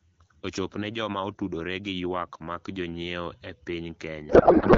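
From 4.29 to 4.77 s, a codec payload misread: octet-aligned AMR-WB frames are unpacked as bandwidth-efficient, so misplaced bit fields turn speech into garbled warble.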